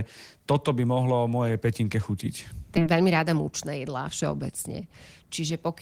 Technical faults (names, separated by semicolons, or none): skip ahead; jitter buffer speed-up